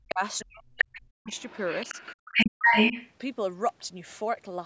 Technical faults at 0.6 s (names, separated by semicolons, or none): speech suppressed in double talk